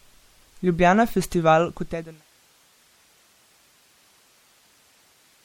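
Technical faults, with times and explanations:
Throughout: MP3 compression. The speech sounds watery and swirly, with plainly audible smearing, which fits a bitrate around 64 kbps. The likely cause is an encoder short of bits that discards the treble above a fixed cutoff and drops weaker frequency components that come and go between frames. On a spectrogram this shows as a hard shelf where the upper band ends, with patchy, flickering holes below it. The fade-out from about 1.5 s to 2.26 s carries the same texture.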